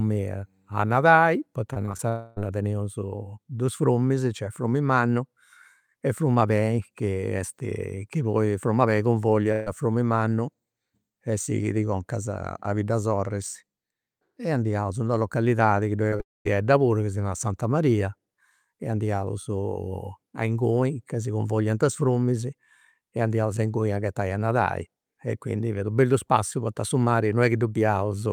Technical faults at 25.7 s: none

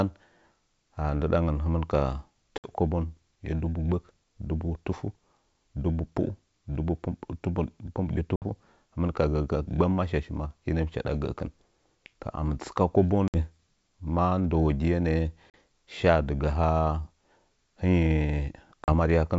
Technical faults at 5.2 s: none

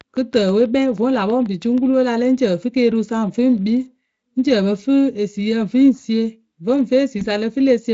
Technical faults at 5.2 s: none

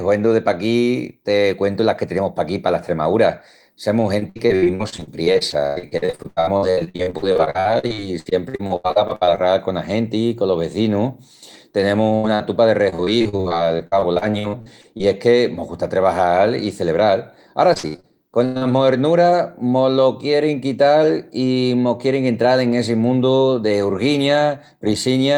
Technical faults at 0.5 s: none

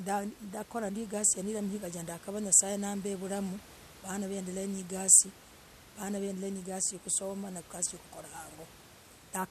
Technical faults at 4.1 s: none

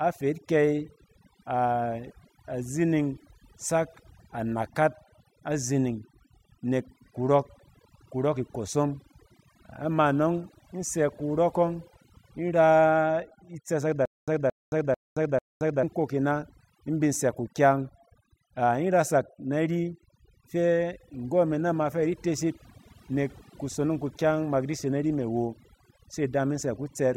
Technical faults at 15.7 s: overdone noise removal; stutter with silent gaps

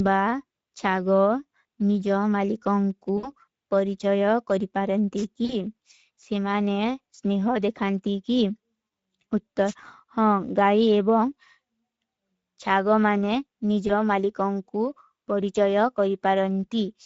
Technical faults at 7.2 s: Speex codec

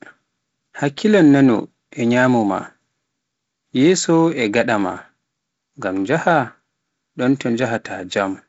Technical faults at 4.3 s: none

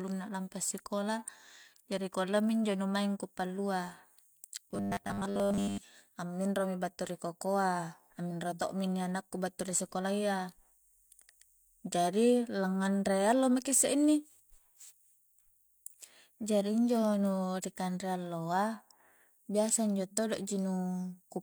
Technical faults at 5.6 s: robotic sound from repeated short buffers

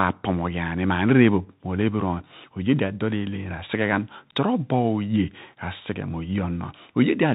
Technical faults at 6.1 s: Bluetooth CVSD headset codec

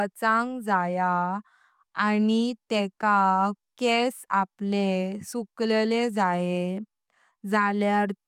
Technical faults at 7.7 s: none

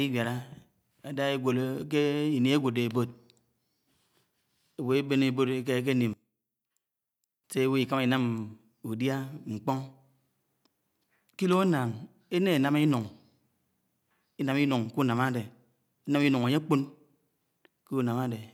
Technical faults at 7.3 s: one channel inverted

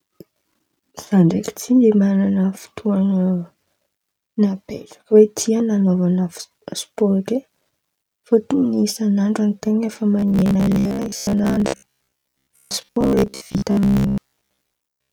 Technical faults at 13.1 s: robotic sound from repeated short buffers

